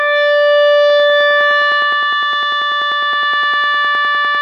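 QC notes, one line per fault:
0.90 to 4.36 s, train of clicks: around forty evenly spaced ticks at 9.9 per second, peaking about level with the music, likely interference or a faulty connection.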